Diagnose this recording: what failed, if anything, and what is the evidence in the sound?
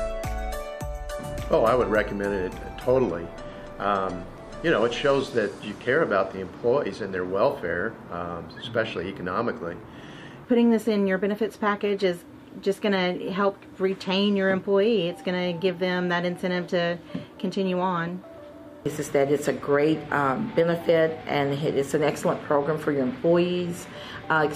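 Nothing failed in this recording, and no stage of the chain leaves an audible fault in the sound. There is no evidence to point to and nothing to diagnose.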